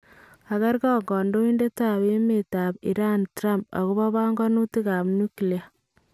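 A short speech recording with no technical faults to report. Nothing in it points to a problem in the recording or playback chain.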